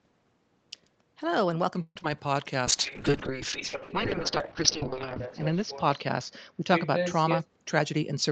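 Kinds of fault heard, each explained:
Call audio freeze: From 1.81 to 1.97 s the sound stalls, stretches into a fading fill, and includes about 40 ms of silence, most likely because packets were held up and the jitter buffer ran dry. Unlike packet loss, nothing is missing; 142 ms of delay is inserted.
Short concealed packet loss: At 1.99 to 2.01 s and again at 2.03 to 2.17 s, 10 ms and then 20 ms of real audio never arrived and were papered over by extending the preceding sound. The result is a brief smear rather than a pause, and actual content is lost, not delayed.
Call bitrate drop: From 2.67 s to the end, the encoder falls from 32 to 9 kbps and stays at its lowest for about 2.3 s. The coding grows coarse and watery, and the top edge falls from 8 kHz to 6 kHz. That is duller than the ordinary low-bass trimming of microphone processing.
Jitter buffer speed-up: Between 7.24 and 8.28 s the receiver trims small pitch-period slices to shrink its backlog, running at about 111 percent and removing something like 150 ms. 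The audio sounds hurried while its pitch stays put, unlike simply playing faster.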